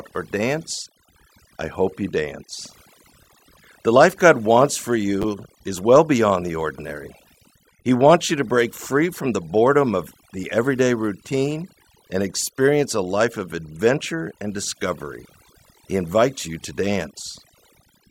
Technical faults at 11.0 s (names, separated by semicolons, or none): overdone noise removal